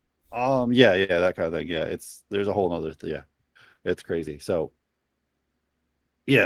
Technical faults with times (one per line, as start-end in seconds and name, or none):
1.71-1.81 lost packet rebuilt from error correction